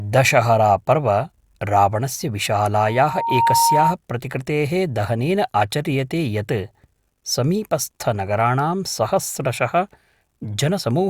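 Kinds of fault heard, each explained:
Loudspeaker feedback squeal: The microphone picks up its own loudspeaker, and the loop gain passes one at a single pitch. Here a steady tone near 925 Hz swells from 2.73 s, rising over less than a second. It reaches about 5 dB above the speech, then stops at 3.95 s.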